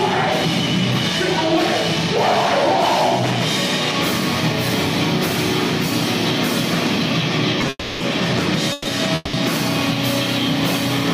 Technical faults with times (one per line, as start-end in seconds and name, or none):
7.69-8.02 call audio freeze
8.72-8.87 call audio freeze
9.15-9.35 call audio freeze